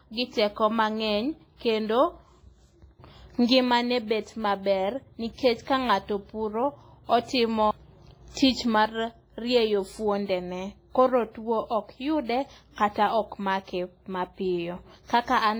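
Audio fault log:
throughout WMA compression: a transform codec at a low bitrate, one that fits roughly 24 kbps, has likely quantised the speech heavily and zeroed its weaker spectral lines, so the speech rings and smears, with a washy hiss that swells and fades alongside it.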